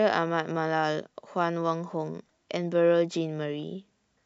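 Nothing in this short speech recording stood out as a technical problem on listening.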